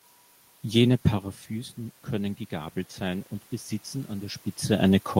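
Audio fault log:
1.48–3.33 s automatic gain rising: after the talker moves back around 1 s and the input falls by about 12 dB, the gain control slowly adds about 3 dB. Voice and room noise swell together up to "besitzen an", shown as a gradually widening waveform envelope and a brightening noise floor across the spectrogram.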